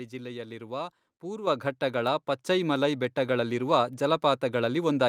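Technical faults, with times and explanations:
1.47 s and 2.49 s: microphone volume stepped up. Input gain jumped about 8 dB, then about 3 dB more. Speech and background noise rise together abruptly.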